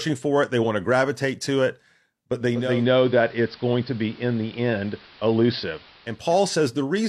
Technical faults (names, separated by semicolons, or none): digital radio blending to analogue